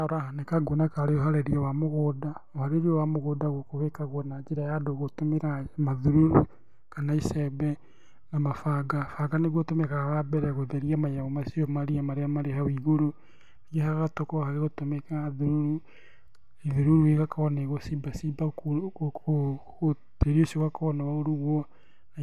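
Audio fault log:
No faults heard anywhere in the speech recording; nothing to log.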